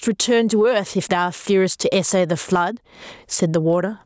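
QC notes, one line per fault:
Throughout: gain pumping. The level swings by around 20 dB, leaving the speech squashed with little level contrast. The likely cause is input gain set far too high, so a fast limiter keeps clamping down.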